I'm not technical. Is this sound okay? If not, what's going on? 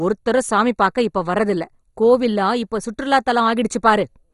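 No, the speech sounds dull and muffled from start to finish, as if the top end has been shaved off, with nothing above about 11 kHz. There is also a gurgling, grainy roughness that comes and goes. This is likely MP2 compression applied heavily: the format divides sound into narrow bands, and when squeezed hard it shuts off the highest bands entirely and stores the remaining ones crudely, which causes both the dullness and the bubbling texture.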